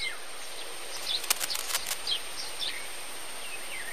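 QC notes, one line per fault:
0.97 to 2.00 s, cable scratch noise: dense, uneven rustling bursts roughly as loud as the sound itself, likely a worn cable or connector shifting its contact resistance.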